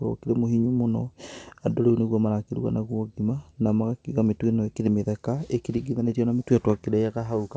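The speech reaches the listener through a WebRTC call path that is working as intended, with a wideband codec that fits G.722 at 64 kbps leaving nothing above 8 kHz, and no technical faults can be heard.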